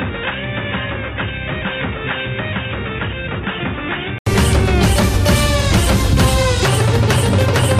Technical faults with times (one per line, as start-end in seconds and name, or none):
0.00-4.26 input switched to a poorer device